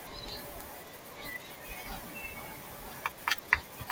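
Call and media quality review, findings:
DAB burbling, 3.25 to 3.40 s in the speech. Short noise blips in single sub-bands over the audio. Component: DAB receiver, MP2 decode. Mechanism: weak reception lets a small residual bit error rate past error correction.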